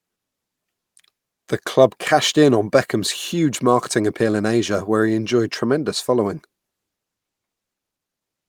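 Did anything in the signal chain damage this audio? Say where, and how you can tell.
No, nothing in the signal chain has damaged this speech recording, and every stage from capture to playback has left the signal intact.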